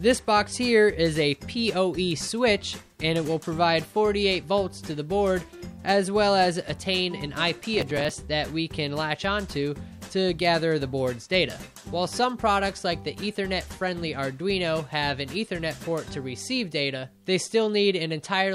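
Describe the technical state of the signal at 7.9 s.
At 7.9 s there is processor overload crackle (7.77 to 8.17 s): roughly twenty missed buffers of around 5 ms leave skipped gaps, heard as gritty tearing and seen as dropouts with vertical broadband streaks.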